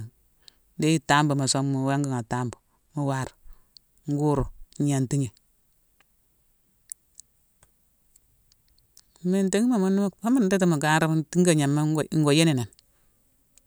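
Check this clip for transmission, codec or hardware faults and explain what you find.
One fault is present. From 1.42 to 3.10 s there is channel delay, causing comb filtering. One channel arrives about 0.02 ms late, which fits a lag of roughly one sample, and the two are summed to mono. Cancellation begins near 20 kHz. The speech loses some air at the top and sounds slightly dull.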